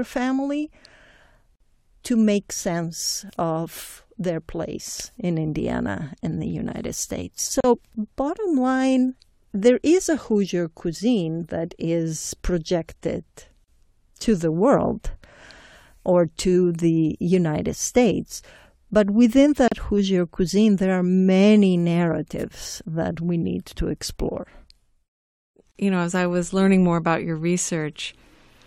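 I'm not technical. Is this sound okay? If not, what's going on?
No. The speech drops out briefly five times, at 1.56, 7.60, 13.64, 19.68 and 25.72 seconds, each a tiny silent hole about 37 to 49 milliseconds long, roughly every six seconds, after which the sound resumes exactly where it stopped. This is a gap at a join of encoded pieces: the recording was likely compressed in separate chunks and stuck back together, and each chunk's built-in padding of silence was left in at the seams.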